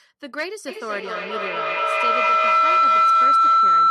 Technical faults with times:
0.68-3.90 feedback howl

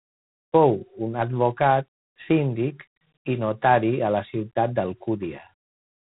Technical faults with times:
0.00-6.20 G.726 ADPCM

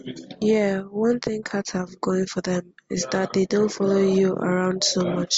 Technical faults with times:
none

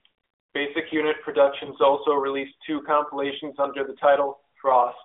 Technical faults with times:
1.66-1.72 lost AMR speech frames

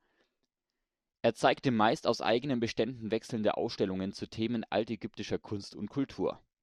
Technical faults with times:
none

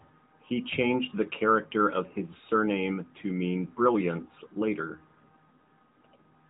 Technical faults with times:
none

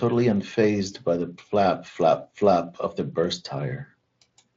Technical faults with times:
none

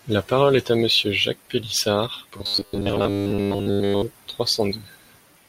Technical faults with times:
2.37-4.03 robotic sound from repeated short buffers

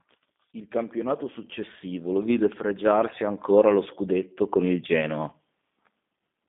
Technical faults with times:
0.00-6.48 G.729 codec

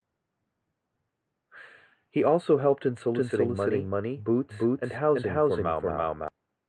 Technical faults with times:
3.14-6.28 doubled audio track

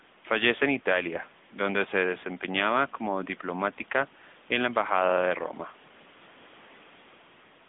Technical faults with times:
0.00-7.69 AMR narrowband mobile codec

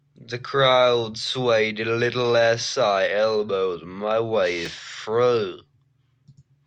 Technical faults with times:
4.66 chunks out of order

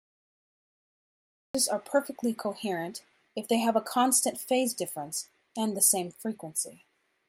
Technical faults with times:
0.00-1.55 cut-off start

